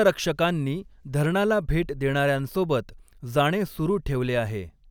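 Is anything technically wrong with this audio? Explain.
No, nothing technically wrong is audible anywhere in this speech recording.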